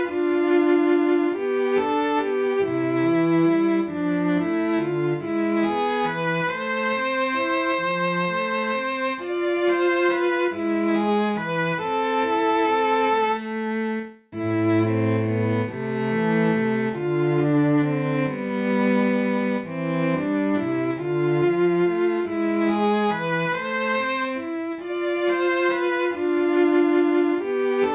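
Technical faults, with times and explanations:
No technical faults can be heard anywhere in the clip; the signal stays continuous and stable throughout.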